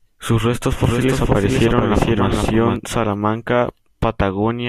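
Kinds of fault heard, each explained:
Doubled audio track: The speech was most likely captured a second time through a slower path, so a full-band copy trails about half a second behind, somewhat quieter, with no decay or room colour, appearing abruptly at 0.84 s and cutting off at 2.76 s.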